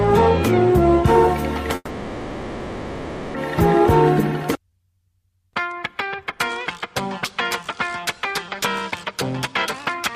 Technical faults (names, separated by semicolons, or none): call audio freeze; jitter buffer speed-up